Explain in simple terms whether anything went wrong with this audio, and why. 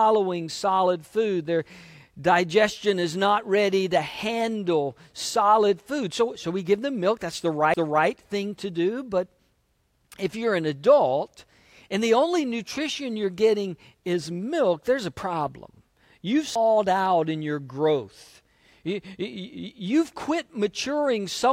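Two CD skips occur, at 7.74 s after "give them milk that's" and at 16.55 s before "out in your growth". Each is a brief tick where the player mutes for a few milliseconds. Unlike a plain dropout, playback then resumes from a different point in the disc.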